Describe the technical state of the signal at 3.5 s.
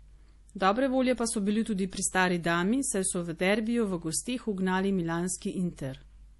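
At 3.5 s, as throughout, nothing sounds above about 11.5 kHz: likely low-bitrate audio saved at a high bitrate, keeping the earlier MP3's cut-off and smeary artefacts.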